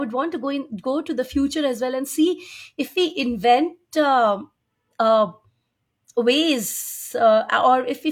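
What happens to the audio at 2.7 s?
Nothing goes wrong at 2.7 s: the speech carries on intact through that moment, with no dropout, click or distortion to be heard.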